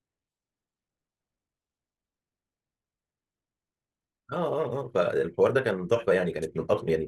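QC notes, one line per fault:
1.91–7.08 s: time-stretched section. At 1.91 s the speech abruptly picks up pace and runs at about 1.47 times normal speed through to the end, yet the pitch stays where it was. To fit the audio into a shorter length, the stretching process most likely kept pitch fixed by cutting out short slices and butting the remaining pieces together. Those dropped fragments make the accelerated portion sound rushed.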